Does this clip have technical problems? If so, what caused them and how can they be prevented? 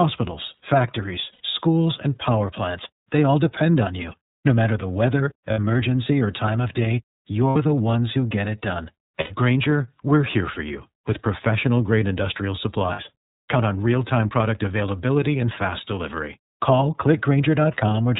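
Yes. The iLBC codec runs throughout: narrowband coding removes everything above 4 kHz, so the spectrogram shows an empty band above it, and the speech sounds plainly rough and synthetic, consistent with its 13.33 kbps, 30 ms mode. Prevent this with a wideband codec such as Opus.

Lost iLBC frames occur at 1.32–1.41, 5.51–5.59, 7.50–7.56, 9.20–9.33 and 12.92–13.00 s. Each is a 60 or 90 ms gap filled with a repeated pitch cycle and noise, heard as a held, buzzy vowel. On the waveform each looks like a short run of regular, repeating periods. Prevent this with jitter buffering, forward error correction or a more reliable network path.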